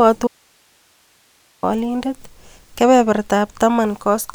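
Audio dropout to a faint residue, from 0.27 s to 1.63 s: the speech cuts out abruptly and stays gone for about 1.36 s, then returns mid-flow just as suddenly. The gap is not silent but holds only hiss, around 40 dB below the speech level. The likely cause is a break in the wanted signal upstream while the rest of the chain stayed live, so its own noise floor carried on through the gap.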